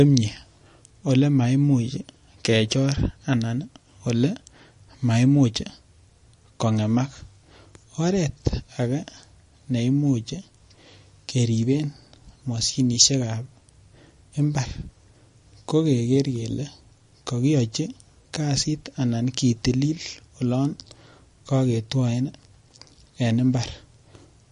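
From start to finish the speech has a watery, swirling quality: s sounds turn metallic and chirpy, consonant attacks smear, and nothing is heard above 10.6 kHz, so the top end sounds dull. This is likely MP3 compression at a low bitrate, roughly 40 kbps judging by the damage. Short of bits, the encoder cut the treble at a fixed frequency and zeroed weak frequency lines, which flicker on and off from frame to frame and cause the swirl.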